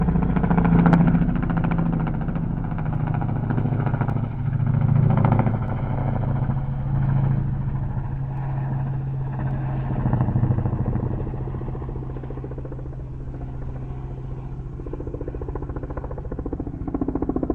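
Sharp single clicks occur at 4.10, 5.68, 8.37 and 9.51 s. Each is likely dropped samples, a fraction of a millisecond missing, making the waveform jump.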